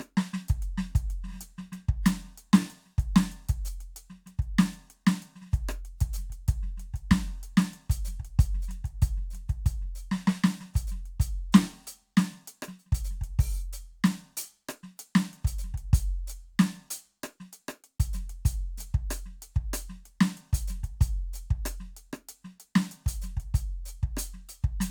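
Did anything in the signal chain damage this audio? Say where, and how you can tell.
No, nothing along the chain seems to have touched this music, and there's nothing in it that points to a problem at any stage.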